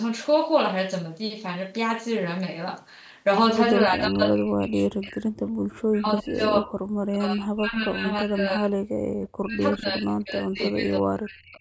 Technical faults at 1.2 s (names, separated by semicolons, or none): none